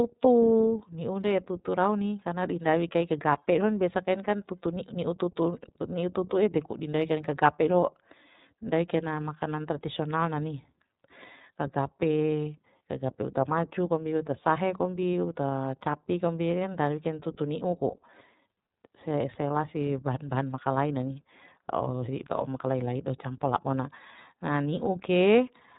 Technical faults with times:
0.00-25.78 iLBC codec

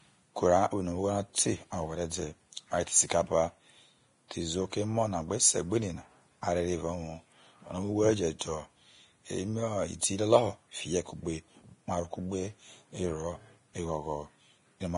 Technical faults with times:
0.00-14.97 Vorbis compression
8.39-8.41 pre-echo

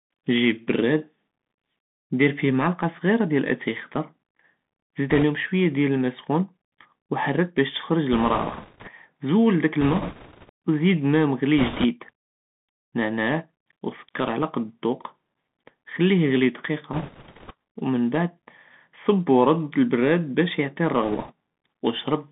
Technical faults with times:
0.00-22.32 Bluetooth CVSD headset codec
5.10-5.24 bit errors on a Bluetooth voice link
8.13-8.91 bit errors on a Bluetooth voice link
9.81-10.50 bit errors on a Bluetooth voice link
11.58-11.85 bit errors on a Bluetooth voice link
16.93-17.53 bit errors on a Bluetooth voice link
21.03-21.32 bit errors on a Bluetooth voice link

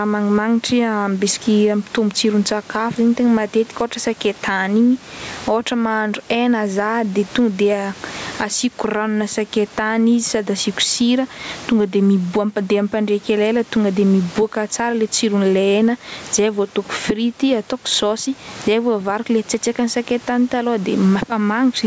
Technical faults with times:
0.00-21.86 gain pumping

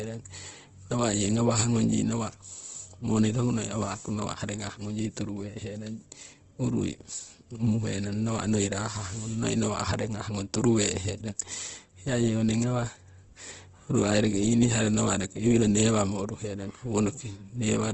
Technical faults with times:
0.00-17.94 Opus compression

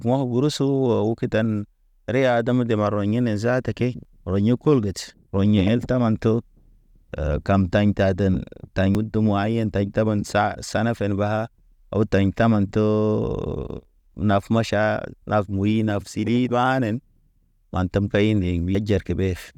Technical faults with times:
4.05 audio missing between chunks
8.95 audio missing between chunks
13.85 audio missing between chunks
18.75 audio missing between chunks

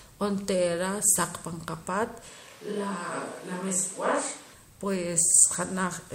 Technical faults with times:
2.29-4.53 switch to a distant microphone

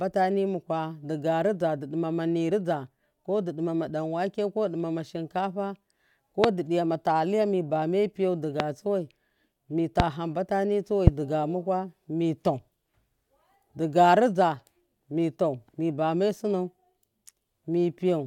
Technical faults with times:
6.44-6.46 loud pop
8.60-8.62 loud pop
10.00-10.02 loud pop
11.07-11.10 loud pop

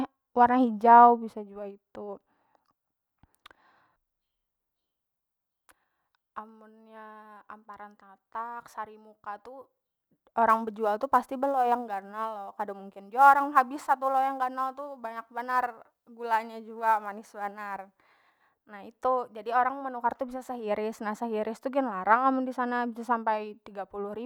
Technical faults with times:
10.49-18.49 sample clock jitter

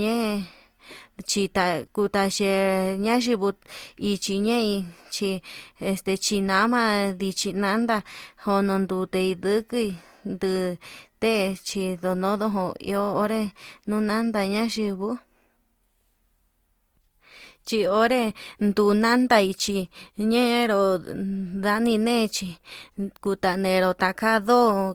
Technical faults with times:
0.00-24.94 Opus compression

